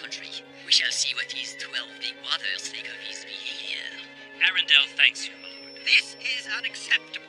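From 5.29 s to the end of the clip, a feedback whistle sits at 5.4 kHz, roughly 25 dB below the main signal. It is a thin, steady tone that swells and fades slowly in level, likely from a loudspeaker-to-microphone loop held just short of runaway.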